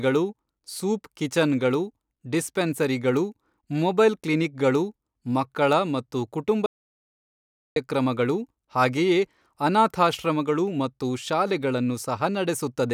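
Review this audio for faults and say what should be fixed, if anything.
At 6.66 s, right after "ಕ್ಲಿನಿಕ್ಗಳು ಮಕ್ಕಳ ಮತ್ತು ಕುಟುಂಬ", the speech cuts out into dead silence with no room tone until 7.76 s, an audio dropout to silence of about 1.1 s. The likely cause is a lost input, such as a loose connection or a momentary mute, while the recorder kept writing silence. Secure the cables and monitor the input level live so that a break is caught and retaken.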